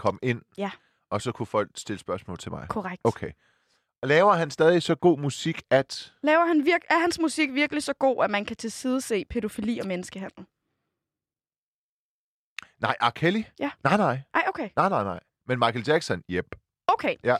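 Nothing stood out on listening to this speech recording.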